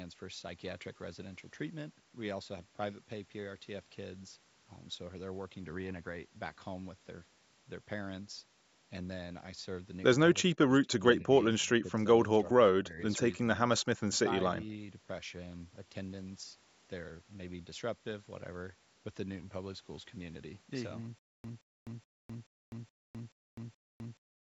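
The echo canceller likely lost track of which signal was its own talker when both sides spoke at once, and turned the near voice down with the echo. The result is speech suppressed in double talk: brief dips at 10.37–10.47, 10.66–10.92, 11.21–11.31, 11.62–11.96, 12.27–12.34, 12.76–12.99 and 13.67–13.84 s. Each is roughly 10 to 20 dB down, and the last sinks by about 30 dB, so syllables thin out or drop away in pieces.

From 21.19 s to the end the stream likely stalled and kept retrying, replaying its last fragment each time before running dry. This stutter with silent gaps sounds like the same 171 ms burst repeating seven times, followed each time by about 256 ms of dead digital silence, a steady 427 ms cycle. The speech that should have filled those gaps is lost. Through all of this, the call microphone processing's band limit shows as nothing above 8 kHz.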